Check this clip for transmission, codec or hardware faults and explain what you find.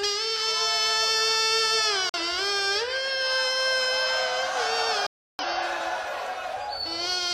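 The clip has two dropouts from corrupt frame muting. At 2.09 s the sound stops abruptly for 0.10 s, then again at 5.07 s for 0.38 s. Damaged compressed frames were rejected by the decoder and replaced with silence. The gaps fit roughly two and seven frames. Timing stays intact.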